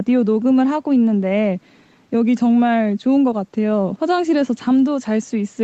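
No technical faults can be heard in this speech.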